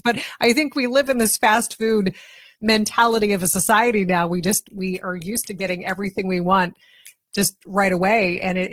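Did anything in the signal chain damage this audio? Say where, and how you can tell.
Yes. Network stage: an adaptive stream switched to a lower bitrate at 1.03 s, after "I think we". Codec artefacts abruptly rise with no gap, consistent with a drop from about 64 to 16 kbit/s.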